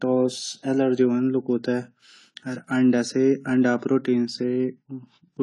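Speech, with audible AAC compression throughout: nothing above 11.5 kHz and a dull, smeared sound, likely from AAC-LC at a low bitrate, which fits around 32 kbps.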